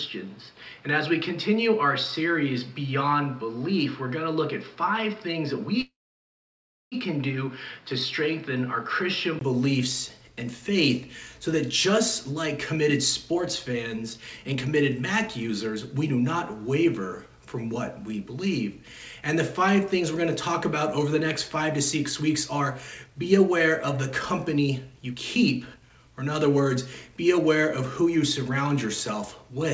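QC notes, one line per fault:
0.00–9.41 s, input switched to a poorer device: likely a change of capture device; the band stops near 5.5 kHz with new background noise about 30 dB down, then a 20 ms gap at 9.41 s before fuller sound returns.
5.81–6.95 s, call audio freeze: likely delayed packets emptied the buffer; the last sound is drawn out, then about 1 s of silence; audio resumes where it stopped, 1.1 s late, nothing lost.
12.33–16.35 s, 17.75–20.23 s, 21.03–23.65 s, 24.54–29.65 s, jitter buffer speed-up: excess buffered audio trimmed by repeatedly cutting pitch-period slices; the sound runs faster at unchanged pitch, at 107%, 104%, 106% and 109% speed.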